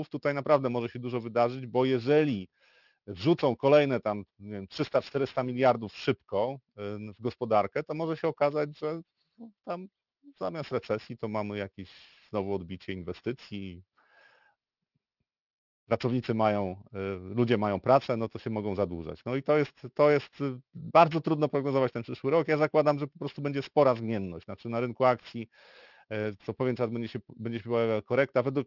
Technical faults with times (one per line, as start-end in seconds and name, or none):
0.00-28.67 aliasing